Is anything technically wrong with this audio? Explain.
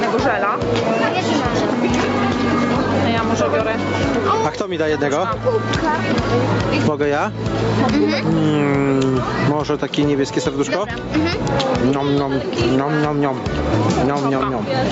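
Yes. Gain pumping runs through the whole clip. The swing is around 10 dB. Loud and soft passages sit unnaturally close in level, so the sound feels squashed. The likely cause is input gain set far too high, with a fast limiter or compressor clamping down on every peak and releasing in the pauses. The audio also carries nothing above about 8 kHz, as expected from a call path.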